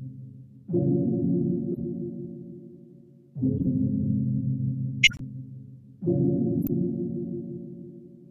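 A corrupt frame decoded appears at 1.71 to 1.84 s, 3.57 to 3.68 s and 6.61 to 6.70 s. Damaged frames still played, scattering energy into noisy blips that grow louder each time. At 5.03 to 5.21 s, a corrupt frame muted leaves an abrupt silent hole where rejected frames were dropped.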